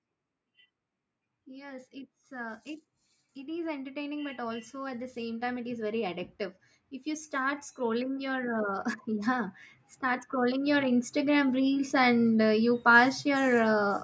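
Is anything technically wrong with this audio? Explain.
Yes, the level drifts upward twice. Automatic gain rising, from 1.3 to 6.26 s and again from 7.3 to 11.97 s, just before "uh you": the gain control judges the input too quiet and ramps up about 10 dB, so the speech and the background swell together over several seconds. The call microphone processing is audible as a band-limited sound with nothing above 8 kHz.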